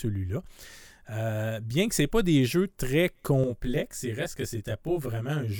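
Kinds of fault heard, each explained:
Channel delay (comb filtering): from about 3.44 s to the end of the speech, one channel arrives roughly 20 ms behind the other, and the two are summed to mono. Components common to both channels cancel at evenly spaced frequencies, starting with a first notch down near 30 Hz and repeating closely up the spectrum. The result is a rough, slightly doubled sound that stays fixed for the remainder of the clip.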